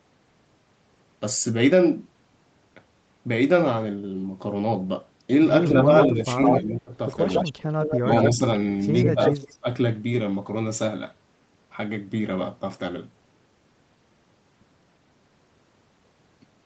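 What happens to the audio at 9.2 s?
An echo leak runs from 9.01 to 9.54 s: a copy of the speech delayed by 152 ms comes back about 5 dB quieter, likely because a loudspeaker echo escaped cancellation. Speech suppressed in double talk overlaps it from 9.14 to 9.65 s, with the talker dipping by roughly 10 dB in pieces totalling about a fifth of a second, likely as the canceller turned down both its own talker and the echo at once.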